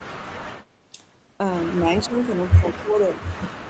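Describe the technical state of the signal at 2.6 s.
At 2.6 s the speech sits inside a stretch from 1.74 to 3.14 s where it was most likely suppressed in double talk. With both ends talking at once, the echo canceller apparently couldn't tell the near talker from the loudspeaker echo and attenuated everything. The speech dips for around a second in total across that span, falling by roughly 20 dB at its deepest, above a band that already stops at 8 kHz.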